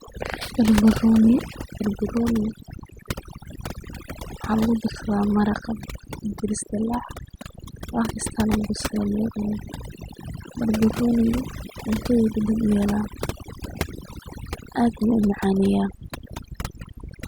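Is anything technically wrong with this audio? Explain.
Yes. Throughout this speech recording there is overdone noise removal. A noise reduction process was pushed too hard, cutting each frequency band deeply whenever its level sat close to the estimated noise floor, so low-level parts of the voice were stripped out along with the noise. Between phrases the background drops to near silence dotted with twinkling specks. A spectrogram would show isolated bright dots scattered over a dark background and ragged, gappy harmonics.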